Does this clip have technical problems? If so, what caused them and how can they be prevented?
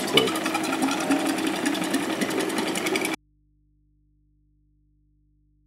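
Yes. At 3.15 s there is an audio dropout to a faint residue: the sound cuts off abruptly and never returns, leaving only mains hum roughly 40 dB below the earlier level until the end. The likely cause is a signal connection lost upstream while the recording input stayed live and picked up hum. On a waveform the trace collapses to a thin band at 3.15 s, and a spectrogram shows broadband energy vanishing, leaving steady low-frequency hum lines. Secure cables and connectors, and monitor the input during recording so a lost feed is caught at once.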